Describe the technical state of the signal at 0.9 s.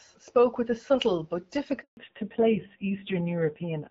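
At 0.9 s the speech comes through intact, carried by the AMR wideband (HD Voice) codec at 12.65 kbit/s with no fault at that moment.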